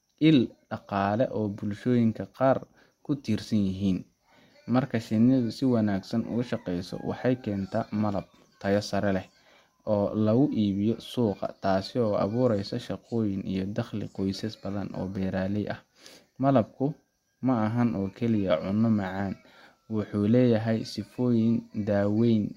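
A recording of speech, with no technical fault to be heard anywhere in it. There are therefore no times or causes to report.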